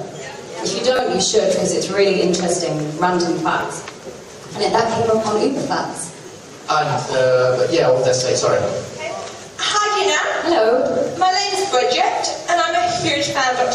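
Repeated buffer faults occur at 0.96 s, 3.6 s and 6.28 s. Each time, fresh audio failed to reach the output in time, so the device replayed its last block. At 0.96 s the same tiny slice sounds three extra times over about 0.03 s, giving a brief buzzy stutter and dropping a few tens of milliseconds of audio. At 3.6 s and 6.28 s a single repeat is heard as a short click. The repeat length fits a 10 ms buffer.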